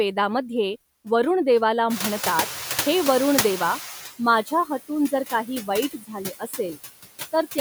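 Noise suppressor artifacts run through the whole clip. The suppressor pulls down bands it judges to be steady noise, frame by frame, by about 13 dB. The background dips in the gaps between phrases and swells back under the speech.

The noise suppressor is catching up from 1.9 to 4.1 s. The room noise jumps by about 16 dB around 2 s and then sits about 12 dB below the speech. The suppressor's noise estimate lags behind this jump. At first the louder noise passes with little reduction. It then sinks gradually over about 2.2 s, settling at a cut of about 12 dB.

Speech is cut by the noise suppressor three times. The first cut runs from 4.46 to 4.70 s, with a dip of about 12 dB. Roughly a tenth of a second of sound is affected. The second runs from 5.93 to 6.17 s and the third from 6.39 to 6.78 s. Each drops by about 15 dB and affects around a fifth of a second. In each case the suppressor mistook quiet speech for noise. 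The cut parts of the speech sound swallowed or faint.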